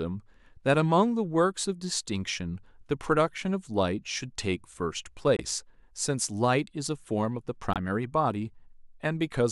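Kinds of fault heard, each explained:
Corrupt frame muted: the decoder rejected damaged compressed frames and the player substituted silence, cutting abrupt dropouts of about 40 ms at 5.36 s and 7.73 s.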